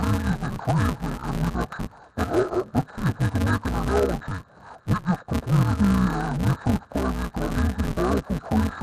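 From start to end, the audio has the fault of interleaved audio read as planar. Each 5.33 ms block, which fits a 256-sample block, is split into halves instead of alternating channels. The result sounds dull and robotic, with a buzz at 188 Hz and no clear octave drop.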